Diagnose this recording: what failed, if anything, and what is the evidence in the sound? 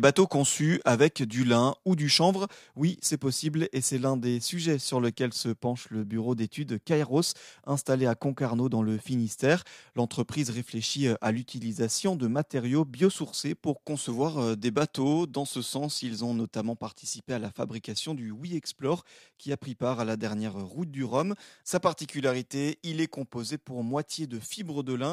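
Nothing in this speech recording points to a failure at any stage of the chain. No event in the sound stands out as evidence of a fault, so there is no mechanism to diagnose.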